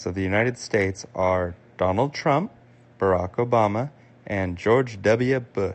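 The speech comes through a call path whose codec limits the audio band to 8 kHz, and no technical faults can be heard anywhere in the signal.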